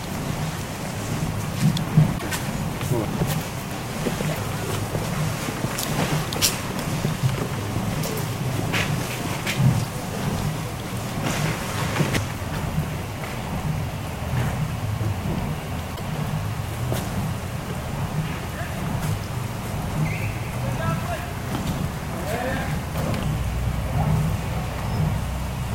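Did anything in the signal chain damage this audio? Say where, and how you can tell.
Yes, at the codec or storage stage. The sound jumps ahead three times, at 2.17–2.22 s, 9.83–9.86 s and 15.95–16.00 s. Each jump opens with a corrupted stretch one or two 24 ms frames long, and the waveform breaks discontinuously. The likely cause is a broken MP3 bit reservoir. After frames were dropped, the next frame reached back for borrowed bits and decoded bytes from a different frame.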